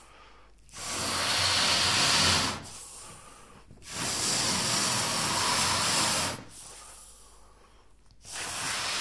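No faults are audible anywhere in this audio.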